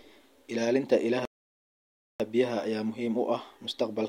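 At 1.25 s the speech cuts out mid-flow for about 0.95 s, resuming at 2.20 s: a playback stall, likely the player starving for data or its thread blocking. On the waveform it shows as a flat line, and the spectrogram goes blank across all frequencies.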